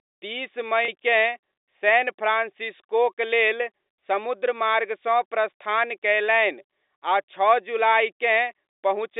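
A speech clip carried over G.711 telephone coding, with the narrow band a phone line gives. At 0.85 to 0.88 s there is packet loss with pitch repetition. About 30 ms of audio drops out, which fits three lost 10 ms packets. The receiver repeats the last pitch period to fill the gap, so the sound briefly holds with a slight buzz.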